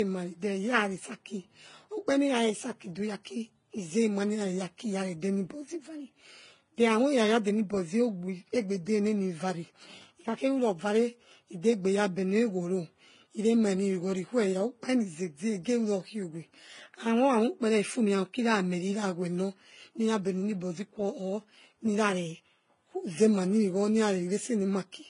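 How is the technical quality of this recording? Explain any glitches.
Quality is poor throughout. The speech sounds dull and smeared, with nothing above 10.5 kHz. Mixed, layered compression artefacts are likely from transcoding between lossy codecs, which fits a low-rate HE-AAC encode re-encoded to Vorbis. The second codec spends bits reproducing the first codec's errors and adds its own.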